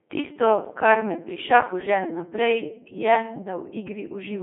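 From start to finish, the speech has gone through a Codec 2 vocoder that transmits only pitch, voicing, energy and spectral shape, then rebuilds the voice from sine waves, at what sounds like about 2.4 kbit/s. It comes out robotic and buzzy, confined to roughly 250 Hz to 3.5 kHz, with nothing above 3.8 kHz.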